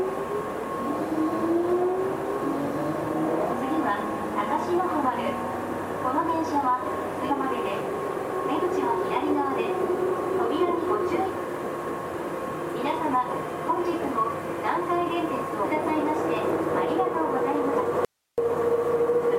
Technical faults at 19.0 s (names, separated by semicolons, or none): none